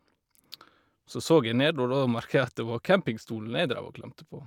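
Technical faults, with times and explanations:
No technical faults can be heard in this speech recording. There is nothing here that needs a time or an explanation.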